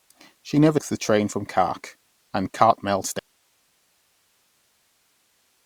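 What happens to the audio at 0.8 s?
A jump between 0.77 and 0.79 s, just before "the train from", as the speech lurches forward by around a fifth of a second. These are compressed frames skipped: about ten 21.3 ms frames never reach playback.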